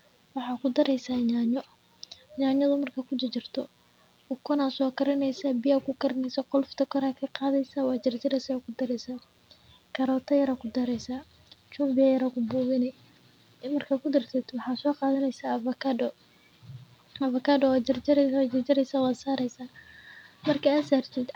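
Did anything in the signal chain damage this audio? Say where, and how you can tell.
Yes: mains buzz runs through the whole speech clip, a raspy 60 Hz hum with switching harmonics, well below the speech, picked up in the analogue wiring from poor shielding or a dimmer.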